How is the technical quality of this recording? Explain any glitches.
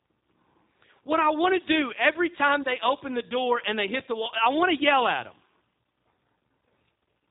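The recording is degraded throughout by plainly audible codec coding, with one low-frequency glitch partway through.

G.729 codec, throughout: the speech is rebuilt at 8 kbit/s from a vocal tract model and sparse pulses, so it sounds rough, synthetic and band-limited below 4 kHz.

DC step at 4.00 s: the waveform's zero line jumps suddenly, giving a low thump. The offset then drains away, which fits a 20 Hz high-pass.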